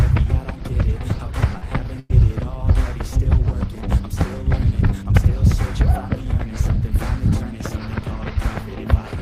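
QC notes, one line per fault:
1.57–1.65 s, short concealed packet loss: about 40 ms of audio never arrived, and the receiver filled the hole by extending the preceding sound before blending back. It is heard as a brief smear or wobble. On a spectrogram, harmonics or noise stretch smoothly across the gap with no fresh onsets.
1.62–1.64 s and 2.09–2.11 s, lost packet rebuilt from error correction: each time a single 20 ms frame was replaced by the low-bitrate copy carried in the next packet. There is no gap, just a momentary rougher, noisier texture. A spectrogram shows a thin vertical strip with grainier energy.
2.00–2.12 s, burst of packet loss: roughly 100 ms went missing, and the receiver prolonged the last sound while turning it down. It comes across as a held buzz or a fading hiss, then the audio resumes further on with that stretch skipped. The waveform shows a decaying, repetitive envelope, and the spectrogram shows frozen, dimming bands ending in an abrupt restart.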